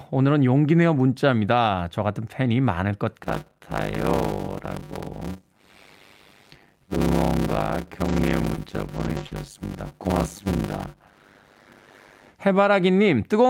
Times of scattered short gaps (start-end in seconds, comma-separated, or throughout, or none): 8.05-9.33